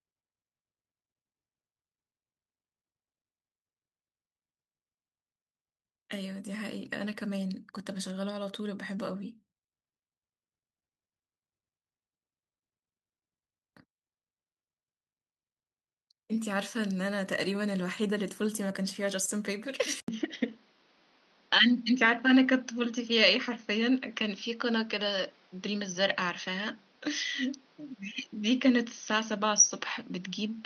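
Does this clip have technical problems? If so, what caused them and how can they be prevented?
Yes. At 20.00 s the sound drops out for 80 ms. It then turns dull until the end, with nothing above 6.4 kHz and new faint background noise, roughly 35 dB down. The cause is likely an input switched to a poorer device. Fix the recording input in the system settings so it cannot change mid-session.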